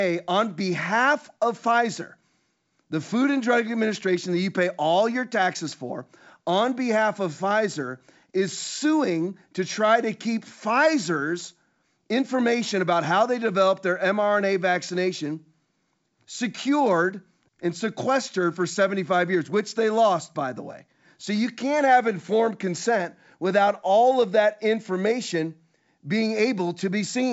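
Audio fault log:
Nothing to log here: the speech comes over a G.722 wideband telephone link at 64 kbit/s, which carries it up to about 7 kHz and works just as it should, with any coding marks faint at most.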